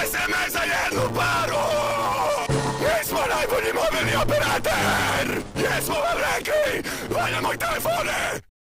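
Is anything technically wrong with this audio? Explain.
Yes. A block size mismatch (truncated) runs through the whole clip. One stage writes longer blocks than the next stage reads, so the tail of every block is discarded. The sound is pulled forward about 1.16 times faster while its pitch stays roughly normal, with a steady 100 Hz buzz from the splice at each block boundary. A waveform shows small discontinuities every 10 ms, consistent with 512-sample blocks being written, and a spectrogram shows a harmonic comb at 100 Hz spacing.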